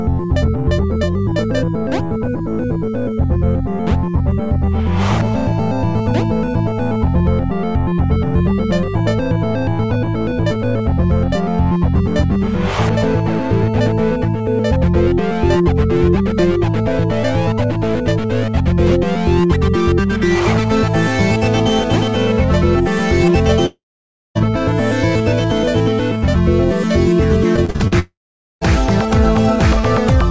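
From 23.66 to 24.37 s there is a long network dropout, likely a stall in packet arrival. About 0.7 s of audio never plays. The last sound is stretched into a decaying fill, then about 0.57 s of silence, and the audio resumes further along with that stretch gone.

From 27.56 to 27.93 s, repeated packet loss gives a choppy, robotic sound. Five gaps, the longest 40 ms, are each patched by extending the preceding sound, and concealment covers about 41% of that span.

Straight after, from 27.99 to 28.63 s, a second long network dropout, likely the same kind of delivery failure, removes about 0.62 s. A brief continuation of the last sound gives way to about 0.48 s of silence before the audio picks up again past the lost part. Throughout, nothing reaches above 8 kHz, which fits a G.722 call path.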